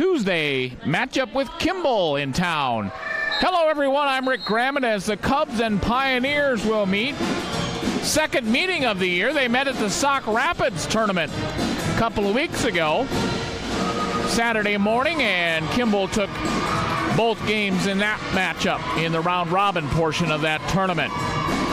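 No technical faults are audible.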